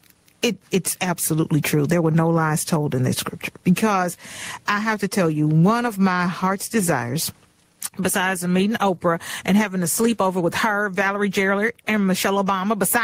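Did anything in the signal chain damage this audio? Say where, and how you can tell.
Yes. Gain pumping runs through the whole speech clip, with a level swing of roughly 25 dB. Loud and quiet passages sit unnaturally close together, so the sound feels squashed. The likely cause is input gain set far too high at the microphone stage, with a fast limiter or compressor clamping down on each loud sound and releasing in the gaps.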